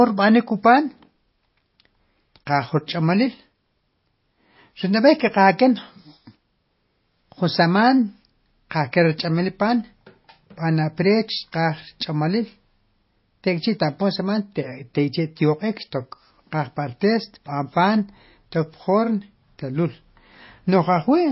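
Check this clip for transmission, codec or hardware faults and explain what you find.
One fault runs through the whole clip. MP3 compression, present from start to finish, is the likely cause of the damage heard in the speech. Short of bits, the encoder cuts all treble at 5.6 kHz, so nothing sounds above that, and it drops weak frequency lines that flicker on and off between frames. The result is plainly audible: a dull, watery, swirling texture with smeared onsets and metallic s sounds, which fits a very low bitrate of around 24 kbps.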